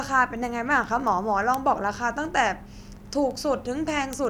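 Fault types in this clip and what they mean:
Word clock ticks, from 0.13 s to 4.25 s: sharp ticks of uneven strength run through the speech at a steady rate of roughly ten per second, about forty in all. They come from a digital link read by a device whose clock is not locked to the sender's. The two clocks drift apart by something like 200 ppm, and each time they slip past each other, a single sample is dropped or repeated, producing one tick.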